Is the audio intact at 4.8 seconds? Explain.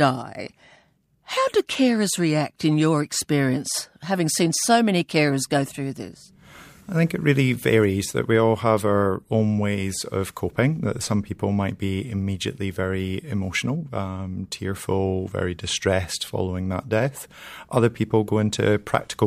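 Yes, the speech at 4.8 seconds is intact, with no dropout, click, distortion or other fault at that point.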